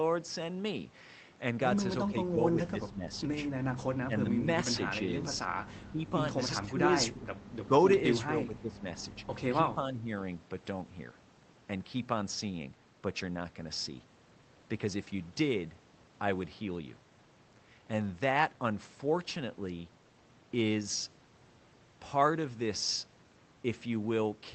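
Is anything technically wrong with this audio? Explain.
Yes. The speech is suppressed in double talk at 2.06–3.07 s, 5.4–7.72 s, 8.26–8.84 s and 9.74–10.1 s. The level dips by up to about 20 dB, or about 5 dB in the last stretch. The likely cause is an echo canceller mistaking overlapping talk for loudspeaker echo and turning it down.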